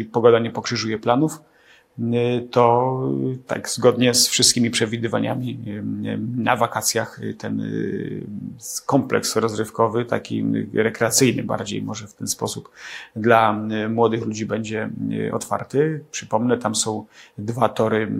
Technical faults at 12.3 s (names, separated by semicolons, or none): none